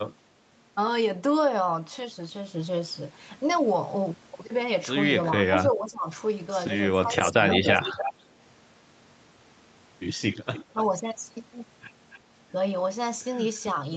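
From 5.25 to 6.07 s the speech drops by about 15 dB, and again from 6.96 to 7.42 s. This is likely speech suppressed in double talk: the canceller could not separate its own talker from the loudspeaker echo and turned both down. From 7.28 to 8.13 s a copy of the speech returns 287 ms late, almost as loud as the original. That is likely an echo leak from a loudspeaker. The speech dips again from 7.78 to 8.09 s. A fainter echo follows from 10.33 to 10.86 s, with a short dip from 10.73 to 10.93 s. A faint echo trace comes at 12.11 to 12.19 s.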